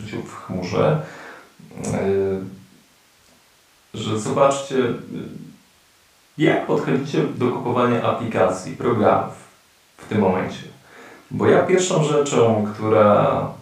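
No technical faults are audible anywhere in the speech recording.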